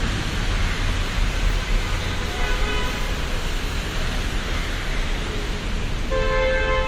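Transcoding between lossy codecs runs throughout this short recording of sounds. The texture points to a WMA encode at around 64 kbit/s that was later re-encoded with Opus at around 32 kbit/s, which is the likely cause. The second encoder spends its limited bits on the first encoder's smearing and quantisation noise and adds its own artefacts, so both codecs' artefacts are heard together. Nothing remains above 20 kHz.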